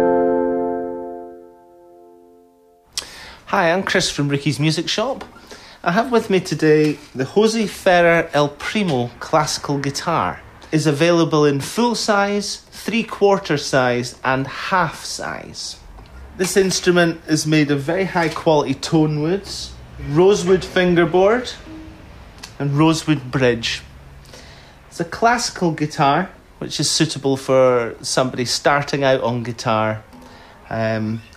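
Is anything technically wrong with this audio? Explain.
No, nothing is technically wrong with this audio.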